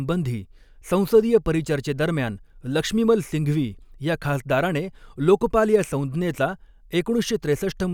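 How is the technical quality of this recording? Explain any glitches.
The signal holds steady throughout, with no glitches of any kind audible in the recording.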